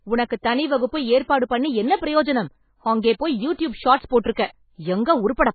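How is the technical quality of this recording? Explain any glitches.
Poor: heavy coding damage runs through the whole speech recording. Nothing survives above 4.5 kHz, so the sound is dull and watery, with swirling texture, chirpy s sounds and smeared onsets. The likely cause is MP3 compression at a starved rate that fits 16 kbps, where the encoder discards the treble and lets weak frequency lines flicker on and off from frame to frame.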